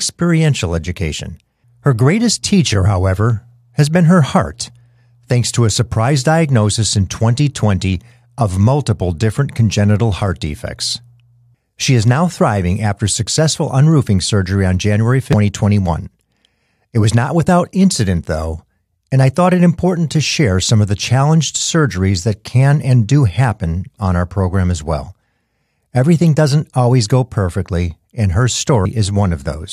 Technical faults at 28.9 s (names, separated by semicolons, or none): damaged data in a compressed stream